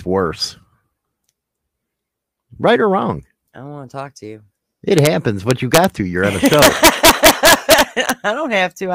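Integer overflow on this speech at 4.99–5.07 s, 5.51–5.84 s and 6.46–8.10 s: peaks pushed about 1–2 dB past full scale wrap to the opposite sign, producing harsh cracks.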